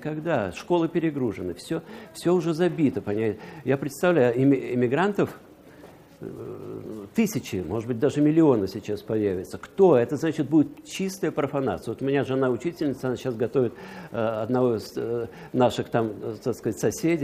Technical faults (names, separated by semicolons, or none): none